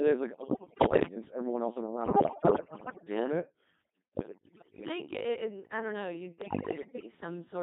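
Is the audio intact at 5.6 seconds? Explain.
No. At 5.6 seconds the speech sounds robotic and buzzy, with a synthetic quality, as it does throughout the clip. This is heavy Codec 2 vocoder damage. Rather than preserving the waveform, the codec transmits only pitch, voicing, energy and a coarse spectral envelope, and the decoder rebuilds the voice from sine waves. It runs at a very low rate of around 2.4 kbit/s.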